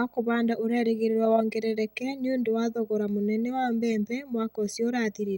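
A steady buzz at 59.94 Hz with hash above it, plus a faint 15.7 kHz whine, sits well below the speech throughout: video or display buzz from picture-signal coupling.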